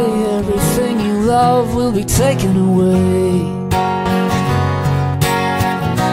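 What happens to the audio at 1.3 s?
Nothing goes wrong at 1.3 s; the audio plays through that moment intact, with no dropout, click, distortion or other fault.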